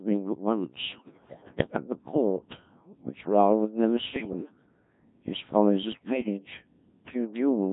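A speech clip that sounds robotic and buzzy throughout, heavily damaged by the Codec 2 vocoder, which rebuilds the voice from sine waves at a rate that fits its 1.3 kbit/s mode. Bursts of bleeps, warbles and pitch jumps at 0.92–1.76 s, 4.16–4.66 s and 5.92–6.38 s are bit errors on digital voice radio, with the worst errors, around a tenth of bits, in the first burst.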